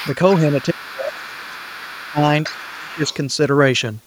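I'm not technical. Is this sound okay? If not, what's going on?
No. A second, fainter voice sits underneath at 0 to 0.39 s, 0.6 to 2.06 s and 2.42 to 3.15 s. This is the other side's voice leaking through, likely because the echo canceller let loudspeaker sound reach the microphone.

The main voice also drops away and thins out from 0.53 to 2.23 s and from 2.48 to 3.1 s, quite sharply in the second stretch. This is speech suppressed in double talk, likely because both sides spoke at once and the canceller turned everything down.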